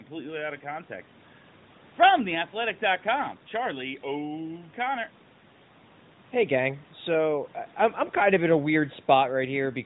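No technical faults are present: the speech carries the band-limited sound of an AMR-NB mobile call, with nothing above 4 kHz and only light coding colour that fits the codec's 12.2 kbps mode, while the call's microphone processing and a room noise floor about 32 dB below the speech sit where they should.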